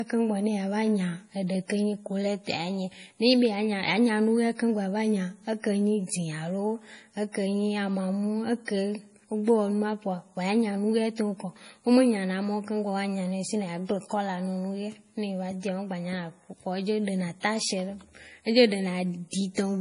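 MP3 compression artefacts run through the whole clip. Nothing is heard above 10.5 kHz, which fits an encoder that ran short of bits and cut the treble at a fixed point, likely at a low bitrate around 32 kbps. The damage is heavy. Weak frequency components drop in and out from frame to frame, giving the speech a watery, swirling texture, metallic chirps on s sounds, and smeared onsets.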